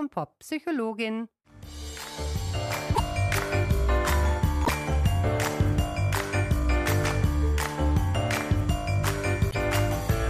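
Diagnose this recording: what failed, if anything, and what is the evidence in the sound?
The failure sits in the codec stage. The sound is disrupted three times: at 2.94 to 3.00 s, 4.64 to 4.69 s and 9.50 to 9.55 s. Each disruption lasts about 55 to 60 ms, roughly two 26.1 ms MP3 frames. The likely cause is a broken MP3 bit reservoir. Frames went missing from the stream. The next frames then reached back for borrowed data and decoded bytes from the wrong frame. So the audio skips ahead and briefly garbles.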